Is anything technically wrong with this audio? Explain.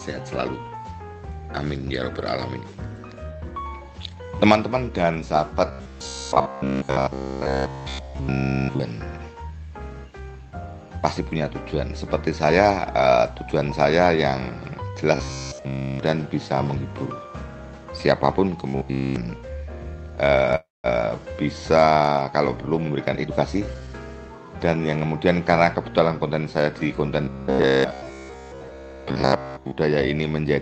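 Yes. The audio shows three kinds of call-path trouble, all heard through a band limit near 8 kHz that points to a low-rate Opus call codec.

Robotic sound from repeated short buffers occurs at 5.68–8.81 s, 15.16–16.00 s, 18.68–19.16 s and 27.24–29.78 s. It is likely caused by the receiver looping its last fragment of about 15 ms, which imposes a rigid 66.7 Hz metallic buzz. In the first three spans nearly all the sound is replaced; in the last, most of it. Unlike a freeze, the sound keeps loosely moving rather than stalling.

A call audio freeze occurs from 20.55 to 20.87 s. Delayed packets plausibly drained the jitter buffer, so the last sound is stretched into a fading tail, then about 190 ms of silence. That adds a gap of 286 ms. Nothing is lost, and the sound resumes exactly where it stopped, unlike a dropout that skips ahead.

A jitter buffer speed-up runs from 22.60 to 23.95 s. To shed built-up delay, the receiver cuts many tiny pitch-period slices, about a third of a second in total. 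The sound plays at 120% speed yet keeps its pitch, which separates it from a simple playback-rate change.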